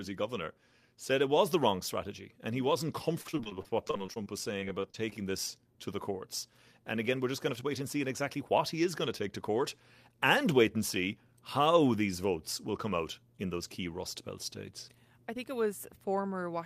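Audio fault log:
3.21–5.15 s, repeated packet loss (robotic sound): right after "he wasn't", the speech goes choppy until "this to the courts". It sounds like a string of lost packets, each short hole (the longest around 35 ms) papered over by stretching the last bit of sound. The patches add up to about 16% of the stretch.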